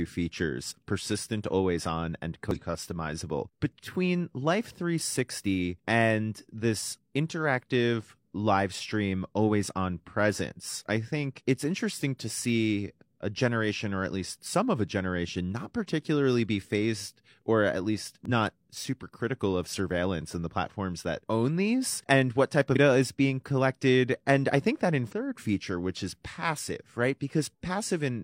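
Damaged data in a compressed stream breaks the speech at 2.51–2.57, 18.25–18.30, 22.71–22.76 and 25.08–25.13 s. Corrupt bytes make the decoder misread frames and lose sync, producing brief glitches that show as abrupt discontinuities in the waveform.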